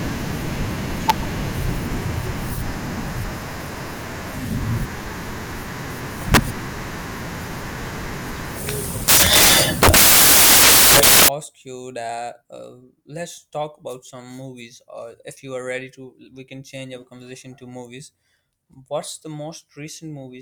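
Samples built from the wrong bytes, 0 to 11.28 s: misassembled bytes make the noisy low bits dominant, burying the speech under loud, harsh broadband noise, close to white on loud sounds.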